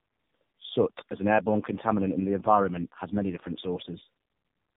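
From start to finish the speech shows tandem speech coding: it passed through two low-rate speech codecs in succession, consistent with narrowband AMR at rates near 5.9 and 7.95 kbit/s with a G.711 link between them. The second coder re-encodes the first one's artefacts, so the speech sounds rough, muffled and warbly. On a spectrogram nothing appears above 3.8 kHz, and harmonics look smeared and blotchy. The waveform looks coarse, with uneven envelopes.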